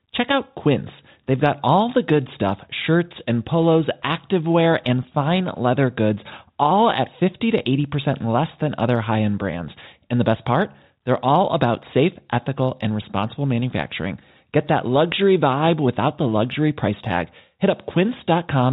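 No technical faults can be heard anywhere in the speech, so there is nothing to set out in time order.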